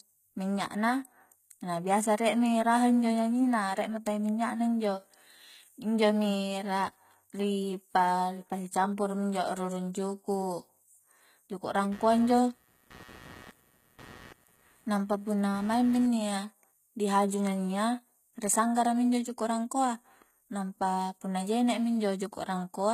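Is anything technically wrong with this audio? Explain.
Yes, there are two faults. Throughout the speech, the treble sounds gritty and lispy on s sounds and stops entirely above 14.9 kHz. This is likely HE-AAC compression at a low bitrate, around 20 kbps, rebuilding the highs from copied lower bands. That grit separates it from simple low-pass dulling. From 11.92 to 16.08 s, computer activity noise appears as a buzzy, chirping pulse at about 150 Hz, roughly 25 dB below the speech. Load changes in the computer are shifting the audio ground, so the noise starts and stops with the machine's activity, unlike steady mains hum.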